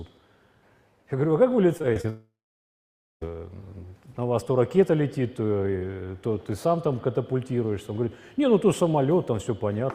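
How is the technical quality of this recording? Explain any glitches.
The recording has two connected network faults early on, both within the first few seconds.

From 1.77 to 2.06 s there is repeated packet loss (robotic sound). Audio data failed to arrive four times in quick succession, and each hole was patched by stretching out the preceding sound. The gaps are short, the longest about 24 ms, totalling roughly 80 ms, but concealment covers about 29% of the stretch, so the sound turns choppy, with small pieces missing.

Immediately after, from 2.10 to 3.23 s, the audio cuts out for a little over a second, most likely a long network dropout in which nothing reached the receiver. The last sound is briefly carried on as a fading buzz or hiss, then about 0.9 s of silence follows before the audio resumes, with the content from that stretch gone rather than delayed.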